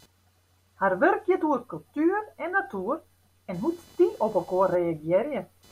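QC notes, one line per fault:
throughout, computer activity noise: shifting processor or graphics load disturbs the ground the audio circuit shares, leaving a faint buzz pulsing roughly 500 times a second, around 35 dB below the speech, that tracks the computer's activity rather than the speech.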